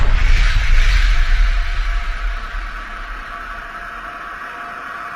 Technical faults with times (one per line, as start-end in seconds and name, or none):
none